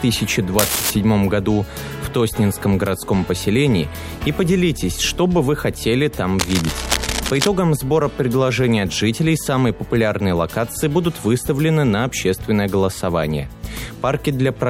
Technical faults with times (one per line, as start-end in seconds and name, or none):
0.59-0.91 cable scratch noise
6.39-7.48 cable scratch noise